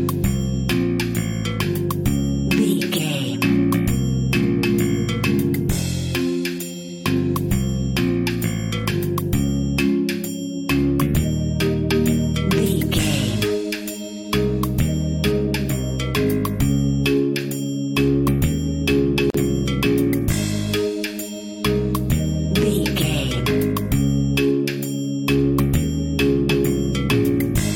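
A gap at a join of encoded pieces opens at 19.30 s and lasts about 43 ms, to 19.34 s. The audio was encoded in separate segments and joined untrimmed, so encoder start delay and final-frame padding leave a silence, its edges smeared by the codec, before the sound resumes where it stopped.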